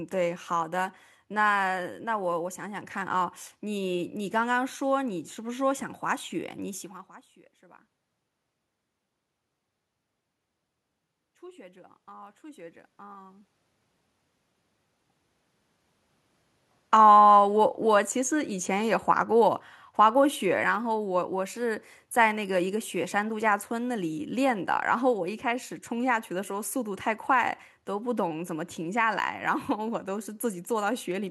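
From 11.22 to 13.54 s the automatic gain rises by about 6 dB. The gain control judged the input too quiet and turned it up gradually, so the speech and the room noise swell together. On the waveform the envelope widens steadily, and the spectrogram's noise floor brightens alongside the voice.

From 16.85 to 29.17 s the automatic gain falls by about 7 dB, a slow correction after the input seemed too loud, coming just after the talker's shift in distance near 16 s. Speech and background sink together, so the waveform tapers gradually and the whole spectrogram dims, noise floor included.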